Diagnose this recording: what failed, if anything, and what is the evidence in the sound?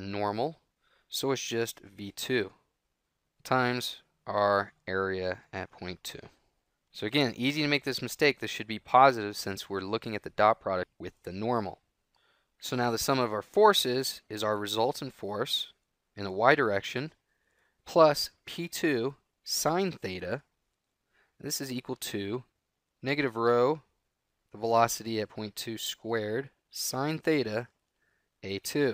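Nothing failed; no fault is audible in this recording.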